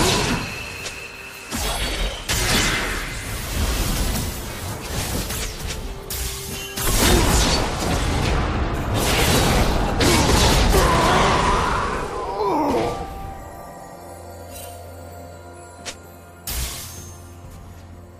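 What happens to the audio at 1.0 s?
Nothing goes wrong at 1.0 s; the audio plays through that moment intact, with no dropout, click or distortion.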